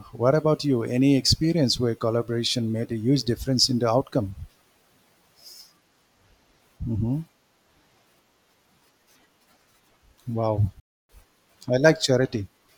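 At 10.80 s the speech cuts out completely and stays silent until 11.10 s, a gap of about 290 ms. The edges are abrupt or fade over a few milliseconds, and when the sound returns it has moved on in time rather than picking up where it stopped. This is likely a Bluetooth dropout: a run of audio packets failed to reach the headphones before their playback deadline, so they were discarded and the output fell silent until valid data arrived again.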